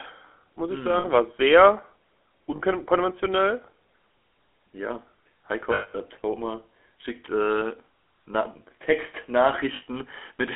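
GSM full-rate codec damage runs through the whole clip. The speech is squeezed into a telephone band of about 300 Hz to 3.4 kHz, with nothing above 4 kHz. The coder models the vocal tract and excites it with regularly spaced pulses, keeping only a thinned-out excitation. This makes every voiced stretch plainly buzzy and gravelly, which fits a 13 kbps full-rate coder.

Lost GSM frames occur at 0.98 to 1.05 s, 2.56 to 2.60 s, 5.74 to 5.96 s and 9.76 to 9.83 s, lasting 60, 40, 200 and 60 ms. The decoder replaces each missing stretch by repeating the last good frame's settings. The sound is briefly frozen into a rough, metallic ring. The 200 ms gap at 5.74 s rings longest before the speech returns.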